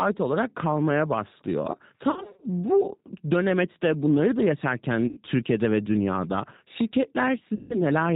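The speech runs through the G.729 codec throughout, which points to G.729A at 8 kbit/s. It rebuilds the voice from a vocal tract filter, a pitch predictor and a few pulses and cuts everything above 4 kHz, so the voice is plainly rough, dull and synthetic.

VoIP packet loss concealed by the speech codec strikes three times. Right after "olarak kalmaya başlıyor", from 2.1 to 2.47 s, about 210 ms of packets drop out, scattered over 320 ms in runs of up to 50 ms. The decoder stretches its last pitch and filter into a buzzy tone or a coloured noise that fades, and the voice stays weak as it recovers. Shorter gaps of the same kind follow at 5.08 to 5.19 s and 7.55 to 7.82 s.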